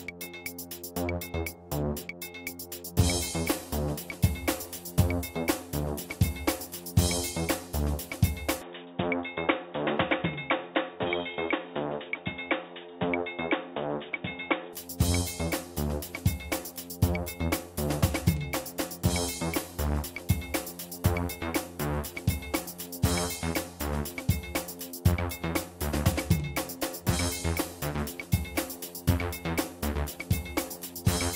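From 8.62 s to 14.73 s the sound abruptly turns dull and boxy, with nothing above 3.8 kHz, then clears again just as suddenly. There is no gap at either switch and the level stays about the same. The likely cause is the input switched to a poorer device partway through. A plain codec bandwidth drop would not do this: alongside the narrower band, the tone colour changes and a faint new background noise appears, well below the signal.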